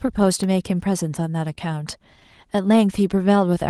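From 0.30 to 0.83 s, five CD scratch ticks, the longest about 3 ms, one per disc turn where a scratch outran error correction.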